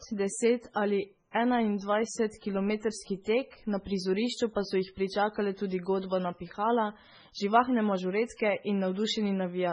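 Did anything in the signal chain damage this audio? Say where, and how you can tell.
Yes, at the codec stage. The speech sounds watery throughout, with nothing above 10.4 kHz, likely heavy MP3 compression at a very low bitrate, around 16 kbps.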